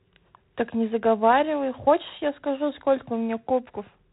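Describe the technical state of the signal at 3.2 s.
At 3.2 s the speech carries G.726 ADPCM damage, present throughout the clip. Each sample is coded as a coarse difference from an adaptive prediction, and the harsh, rasping hiss tracking the speech level fits 24 kbit/s coding. Nothing passes above 3.8 kHz.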